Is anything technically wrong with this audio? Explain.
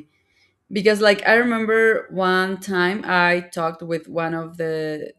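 No, nothing technically wrong here.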